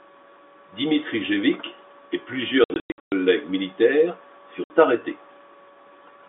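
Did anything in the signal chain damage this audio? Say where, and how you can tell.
Yes: packet loss filled with silence, network stage, 2.64–3.12 s and 4.64–4.7 s. Hard-edged gaps up to 120 ms fit dropped 20 ms packets replaced by silence.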